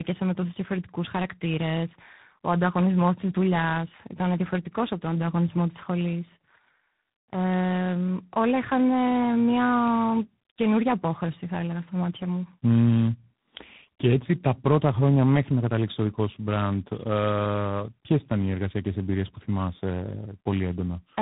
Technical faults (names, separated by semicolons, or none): tandem speech coding